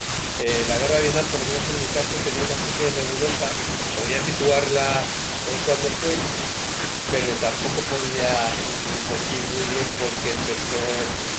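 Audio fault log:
The speech has gone through a call's microphone processing and a WebRTC call path whose codec leaves nothing above 8 kHz, and no faults can be heard.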